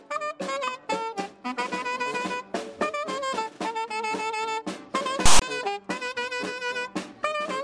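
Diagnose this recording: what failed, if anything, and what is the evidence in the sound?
A storage-stage failure: file tags played as audio. From 5.26 to 5.42 s a hard-edged burst of loud, one-sided rasp cuts in, then drops to dead silence. The player read a tag block as samples, text bytes giving the lopsided rasp and zero padding the silence.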